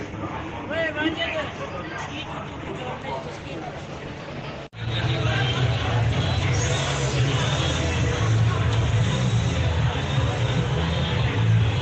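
From 0.25 s to 11.66 s, faint regular ticks recur about every 0.7 s, roughly fifteen in all. These are clock slip clicks, likely from two devices running on unsynchronised clocks, with a mismatch of around 30 ppm accumulating until a single sample is dropped or repeated. Each tick is clearest on loud sustained sound and disappears in silence. A spectrogram shows thin vertical broadband lines at even spacing, and zooming into the waveform shows a one-sample step at each line.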